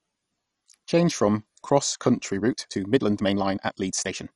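A short speech clip with a dull, gurgly, granular sound throughout, most likely MP2 compression at a low rate, around 48 kbps. From 2.3 s to the end it suddenly turns rushed, running about 1.45 times faster at the same pitch, likely a time-stretched section squeezed to fit.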